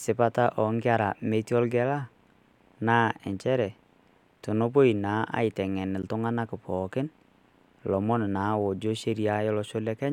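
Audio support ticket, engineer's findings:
Block of digital silence at 6.02 s. Output path points to a buffer not filled in time, so about 10 ms of samples dropped to zero. Speech cuts out and back with no fade; hard edges give a short tick.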